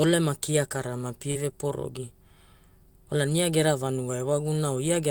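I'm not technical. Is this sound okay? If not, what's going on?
No. Around 1.31 to 1.37 s there's a brief smear, a short concealed packet loss: about 40 ms of the call arrived too late, so the receiver stretched the previous sound to cover it. At 1.35 s and 3.29 s, a roughly 20 ms rougher, noisier spot is a lost packet rebuilt from error correction, a lower-quality backup copy carried in the next packet.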